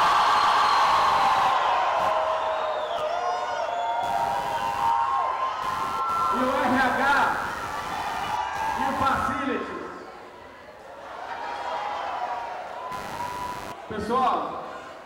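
Computer activity noise runs through the whole clip. Load changes in the computer shift the ground the audio circuit shares. That leaks in as a buzzing, chirping texture pulsing around a hundred times a second. It sits roughly 15 dB below the sound and tracks the machine's activity.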